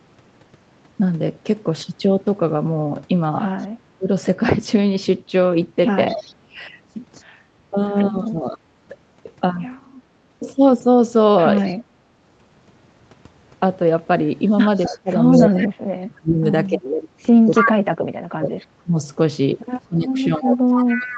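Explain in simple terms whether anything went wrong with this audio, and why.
Several things went wrong, all tied to the echo canceller on a speakerphone call.

Echo leak: the echo canceller on one side likely failed to scrub out what its microphone picked up from the loudspeaker, so that sound was sent back. You hear a delayed copy of the speech, trailing about a quarter of a second (263 ms) behind, from 3.58 to 8.31 s, where it is faint, and from 11.6 to 17.73 s, where it is as loud as the speech itself. It returns, fairly quiet, from 20.88 s to the end.

Speech suppressed in double talk: when both sides talked at once, the canceller likely could not tell the local talker apart from the loudspeaker echo, so it turned both down. The speech dips sharply for a brief moment at about 4.0 s, again between 7.71 and 8.65 s, and then from 14.89 s to the end, where the drop is deepest and the talker is pushed well down.

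Background gated by the echo canceller: while the loudspeaker was playing, the canceller clamped the microphone down hard. The room sound dips for about a tenth of a second, from 6.35 to 6.47 s, then comes back as the canceller lets go.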